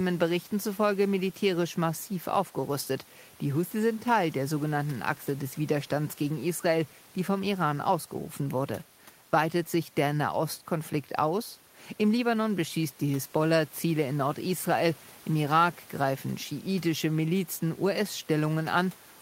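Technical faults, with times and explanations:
No technical faults can be heard in this speech recording. Some room noise sits in the background about 28 dB below the speech, as part of the recording itself.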